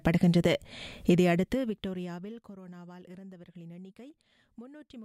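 From 1.22 to 2.58 s there is zipper noise. The level falls by roughly 25 dB in coarse steps, about fifty a second, with no smoothing. Each jump leaves a tiny click. Together they form a fast ticking that rides on the sound during the fade.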